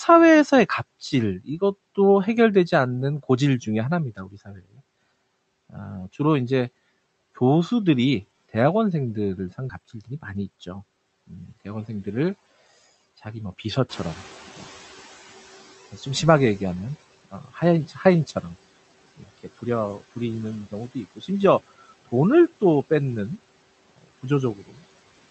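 Speech recorded through a call path that fits Opus, with content above about 8 kHz absent on a spectrogram. Speech cut by the noise suppressor occurs at 1.39–1.62 s, 4.17–4.81 s, 17.25–17.62 s, 17.88–18.05 s, 19.17–19.46 s and 24.56–24.79 s, where soft parts dip by roughly 8 to 18 dB and appear as sudden faint gaps in the waveform envelope. A skip ahead at about 9.7 s drops around 0.4 s of audio, leaving a hard splice where the spectrogram's harmonic pattern jumps abruptly. A jitter buffer speed-up follows at 10.34–10.58 s, playing about 14% fast at unchanged pitch, so spectral events crowd closer together in time. When the room noise rises by about 13 dB near 14 s, the noise suppressor is caught catching up from 13.89 to 15.80 s, letting the noise floor through before it sinks by about 12 dB over roughly 1.9 s, seen as a fading band of broadband energy.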